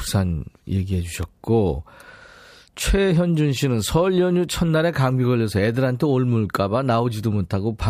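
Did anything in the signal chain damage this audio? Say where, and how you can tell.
Yes. An electrical switching spike sits at 1.23 s in this speech clip: a single sharp snap, only a couple of milliseconds long and peaking around -20 dBFS, laid over the speech rather than replacing it. That points to the analogue wiring stage. The likely cause is a nearby switch, motor or static discharge arcing briefly, with the cable or input picking up the burst as a transient added on top of the signal.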